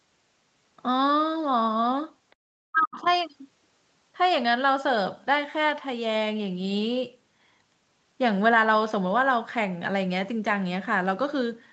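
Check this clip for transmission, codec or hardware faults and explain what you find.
Two faults stand out, both clustered between 2.3 and 3.2 s of this speech clip.

Other side's voice leaking through occurs at 2.31 to 2.35 s, 2.81 to 2.86 s and 3.04 to 3.16 s. Faint scraps of a second voice appear, roughly 40, 35 and then 30 dB below the talker. The likely cause is loudspeaker echo the canceller left in the microphone signal.

Speech suppressed in double talk runs from 2.65 to 3.06 s. The talker's voice ducks in pieces for about 0.4 s, dropping by as much as about 40 dB. This is likely the echo canceller pulling down the whole signal while both sides spoke.

The audio has no content above 8 kHz, which fits a wideband call codec such as Opus.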